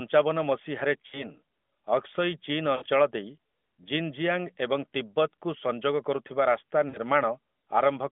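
Brief warbling dips, where the speech smears and sags before recovering, occur at 1.08 to 1.25 s, 2.76 to 2.84 s and 6.90 to 6.98 s. These are lost AMR speech frames: the decoder repeated earlier pitch and vocal-tract settings at falling gain, over gaps fitting two, three and two 20 ms frames.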